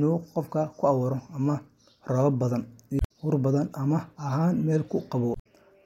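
At 2.97–3.11 s, just before "huur badan ma ahan", and at 5.32–5.46 s, damaged data in the compressed stream makes the decoder lose frame sync, producing short glitches.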